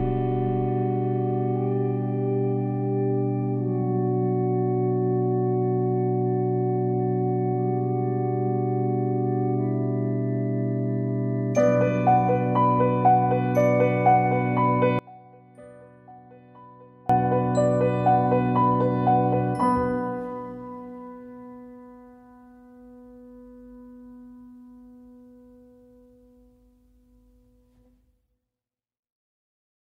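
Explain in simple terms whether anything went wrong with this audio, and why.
Something did go wrong, from 14.99 to 17.10 s. For about two seconds the sound drops away almost completely, background included, then returns at its normal level. The likely cause is one channel inverted: one side of the stereo recording had its polarity flipped, so when both sides were combined into this single-channel clip, the matching parts cancelled each other out. Only the small differences between the two sides remain during that stretch.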